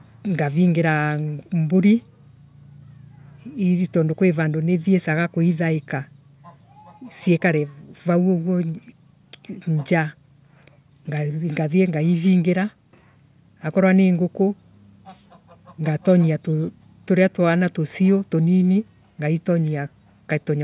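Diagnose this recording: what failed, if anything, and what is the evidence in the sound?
No fault detected in this recording.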